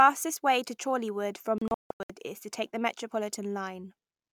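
Speech falls into short silent holes from 1.58 to 2.10 s, before "is to take the": a digital broadcast dropout, the receiver muting lost frames.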